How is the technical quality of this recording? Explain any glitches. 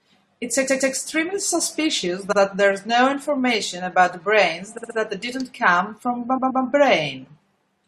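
The recording stutters from repeated frames at 0.67–0.93 s, 2.31–2.38 s, 4.77–4.96 s and 6.37–6.62 s. Blocks of compressed speech 64 or 128 ms long replay one to three extra times. Each sounds like a skip back and lengthens the speech.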